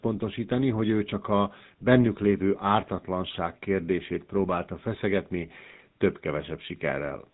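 GSM full-rate codec damage runs through the whole clip and is plainly audible. The speech has been squeezed through a model of the vocal tract excited by a regular train of pulses, with only every third excitation sample kept, which fits the original 13 kbps GSM rate. The result is a buzzy, gravelly roughness in the voice, and the band stops at 4 kHz, so sibilants lose their edge. The call's microphone processing has trimmed the deepest bass.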